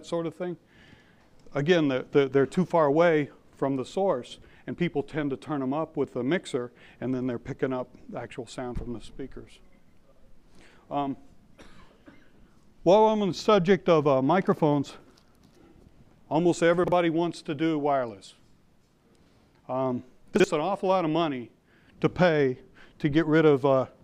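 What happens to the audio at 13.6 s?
Nothing goes wrong at 13.6 s: the audio plays through that moment intact, with no dropout, click, glitch or other fault.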